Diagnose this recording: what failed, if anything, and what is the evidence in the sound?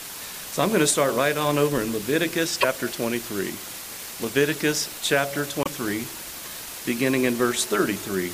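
Sample-format conversion is the first problem, and it runs the whole length. The audio sits under a constant, even hiss with no gritty distortion riding on it. That's low bit depth with dither. The signal was squeezed to about 5 bits, and the dither turned the rounding error into flat white noise. With so few bits, the hiss is only about ten dB below the signal, so it never lets up.

Next is a codec problem, heard twice: a short glitch from 2.60 to 2.65 s and again from 5.63 to 5.68 s. Each time the audio skips forward with a brief chirp or hole. Each event lasts about 44 ms, under two frames of roughly 26 ms, so the likely culprit is a broken MP3 bit reservoir. Frames went missing, and the next frame reached back for borrowed bits and decoded someone else's bytes.

Last is analogue wiring picking up RF, from 7.13 to 8.13 s. A hard, raspy buzz at 217 Hz comes in, full of harmonics, about 22 dB below the signal and unrelated to it. 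That's GSM phone buzz. A nearby 2G handset's transmit bursts got rectified in the audio circuit. The buzz holds steady for the whole second rather than stuttering, which points to the phone being on a call.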